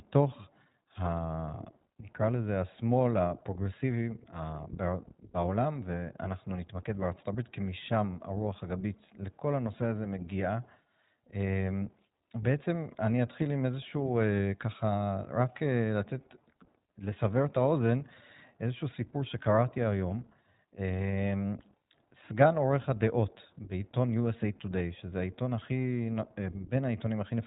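From start to finish the speech carries plainly audible iLBC codec damage: a narrowband coder with nothing above 4 kHz, giving a dull, slightly rough, synthetic tone. A spectrogram shows a hard ceiling at 4 kHz, and the frame-by-frame texture fits 20 ms frames at about 15.2 kbps.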